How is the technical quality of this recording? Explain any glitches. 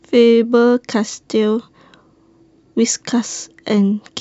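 The technical quality of this recording holds up, with no glitches to explain.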